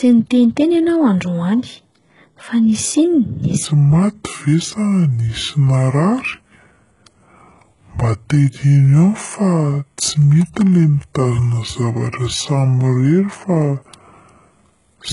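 Speech recorded with heavy codec damage throughout, most likely HE-AAC compression at a very low bitrate, around 12 kbps. Nothing remains above 11.1 kHz, and the treble that is present is synthesized by copying lower bands upward, so s sounds come out gritty and lispy with a metallic edge. From 3.65 s to the end, a section at the wrong speed plays at 0.645 times normal, dropping pitch by roughly seven semitones so the voice turns deep and sluggish, likely from playback against the wrong clock.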